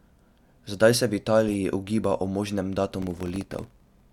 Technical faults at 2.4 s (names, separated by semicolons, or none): none